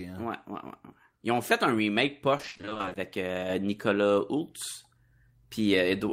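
From 2.37 to 2.97 s there's repeated packet loss, giving that robotic sound. Short holes, none longer than 20 ms, keep arriving, and each is filled by stretching the previous sound, so about half of that stretch is patched rather than real, making it choppy.

At 3.50 s there's a sudden gain jump: the speech and the background noise both step up by about 5 dB together and stay there to the end. That's likely a gain setting applied between one sample and the next with no ramp.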